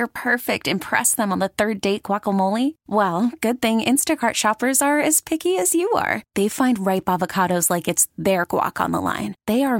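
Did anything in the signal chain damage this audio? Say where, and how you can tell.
Yes. The speech skips forward twice. The first is at 5.16 s, between "shoppers are" and "picky as you are", and loses roughly 10 ms. The second is at 8.44 s, just after "ripe avocados like it's", and loses around 20 ms. Neither leaves any silence. This is likely a dropped buffer (overrun) at the driver or buffer stage: samples were overwritten before being read, and the remaining audio was butted together. The waveform shows an abrupt step discontinuity, and the spectrogram shows a thin full-band vertical line.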